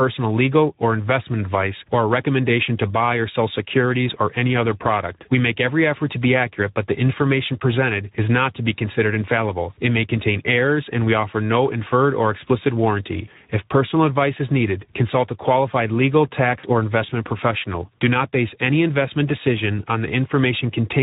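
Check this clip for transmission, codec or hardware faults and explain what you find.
Two things stand out: Speex codec damage across the whole clip, and one short packet-loss dropout near the end.

The Speex codec coloring runs the full length of the speech. Speex is a CELP coder, and at a low setting it doesn't have many bits for the excitation signal. Here the damage is plainly audible: a noisy, hoarse edge on the voice, with anything up top sounding like a shaped hiss rather than real detail. That degree of roughness fits a mid-low mode around 11 kbps.

The VoIP packet loss concealed by the speech codec lands at 16.59 to 16.66 s, right after "consult a qualified legal" and before "investment professional". The decoder lost packets and filled the gap by repeating its last pitch and filter while turning the gain down. You hear a brief stretched sound, buzzy or noise-like, that fades, and the voice stays weak or distorted as it recovers. 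The roughly 40 ms hole fits two lost 20 ms frames.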